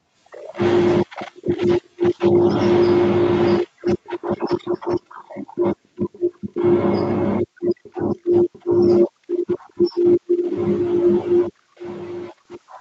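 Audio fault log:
4.04–5.23 s, 6.12–6.54 s, 7.83–8.21 s, 8.53–8.62 s, 9.68–9.92 s, echo leak: a faint copy of the speech trails about 0.4 s behind, roughly 25 dB down (much fainter at 9.68 s), likely a far-end speakerphone whose echo canceller let scraps slip back.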